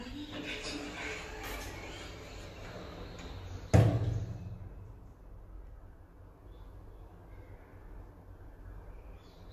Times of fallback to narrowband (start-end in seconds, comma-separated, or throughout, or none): none